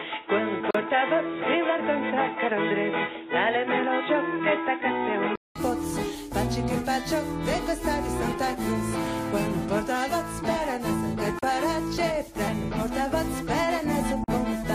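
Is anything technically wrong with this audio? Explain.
Yes. From 0 to 5.56 s the sound is band-limited, with nothing above 3.8 kHz, and a faint noise floor about 35 dB down. A 200 ms silence marks the change back to full bandwidth. The likely cause is an input switched to a poorer device.

There are three gaps at joins of encoded pieces: 38.5 ms at 0.71 s, 37.1 ms at 11.39 s, and 41.8 ms at 14.24 s. Separately encoded segments kept their padding silence, so the sound drops out briefly and then resumes.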